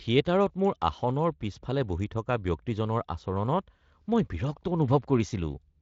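Two unsynchronised clocks, likely drifting apart by something like 50 parts per million, make a single sample drop or repeat each time the error builds to a whole sample. In this speech clip that gives clock slip clicks from 0.19 s to 5.47 s: faint, evenly spaced ticks about every 0.4 s, roughly fifteen in all, heard over the light Speex coding, whose band stops near 7.6 kHz.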